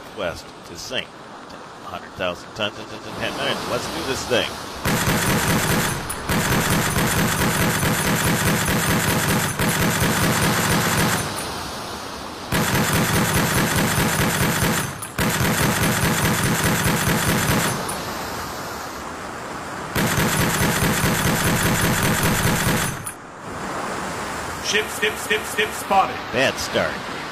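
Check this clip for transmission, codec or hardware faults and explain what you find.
The clip has one fault, repeated frames, occurring four times.

Repeated frames at 2.79 to 3.07 s, 10.55 to 11.11 s, 21.60 to 21.98 s and 24.99 to 25.83 s: a run of compressed frames was delivered more than once, so the decoder replays the same stretch. The repeated blocks are 139 ms, 279 ms and 186 ms, each played twice more, and 279 ms played three more times, which fits runs of a few frames. Each is heard as a stutter, and together they lengthen the audio by about 2.04 s.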